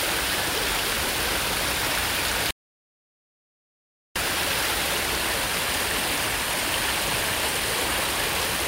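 The input likely dropped out between 2.51 and 4.16 s, so silence was written: an audio dropout to silence, about 1.6 s of dead gap with no room tone.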